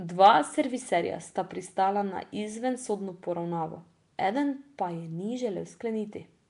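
Throughout, the speech has a hissy halo and smeared, underwater tone with nothing above 10.6 kHz, likely Nellymoser compression filling starved bands with noise.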